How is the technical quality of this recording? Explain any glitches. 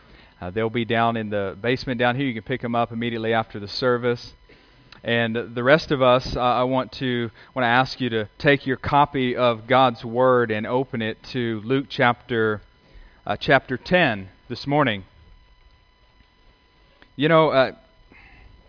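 No glitches or technical faults can be heard here.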